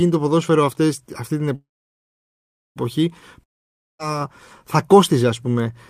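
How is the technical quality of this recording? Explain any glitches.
The recording has two network-related interruptions in the speech, each leaving an audible gap.

From 1.55 to 2.78 s there is a call audio freeze, likely from packets stalling until the jitter buffer emptied. The last sound trails off briefly, then about 1.1 s of silence follows. Speech resumes exactly where it stopped, losing nothing but arriving about 1.2 s later.

From 3.44 to 4.01 s a long network dropout occurs, likely a stretch where no packets were received. After a brief fading tail, silence fills roughly 0.55 s. Speech returns further along, with about 0.56 s of audio permanently missing.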